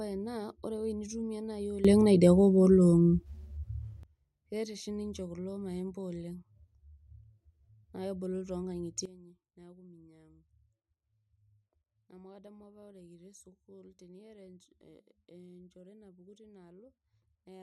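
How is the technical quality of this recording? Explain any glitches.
The recording has two sudden gain jumps. From 1.85 to 4.03 s, starting just before "keeta oshi", speech and background noise step up together by about 18 dB. From 9.06 s to the end, they drop by about 15 dB. The likely cause is a digital gain change applied instantly rather than ramped.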